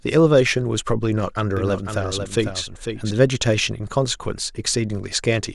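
From 1.57 s to 3.11 s the speech carries a doubled audio track: a single full-band copy trails about half a second behind, somewhat quieter, and cuts in and out abruptly. Unlike an echo, it has no decay or room colour. A second, slower capture path is the likely cause.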